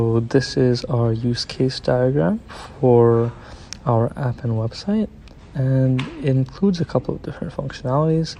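No technical faults can be heard anywhere in the audio, and the signal stays steady and intact throughout.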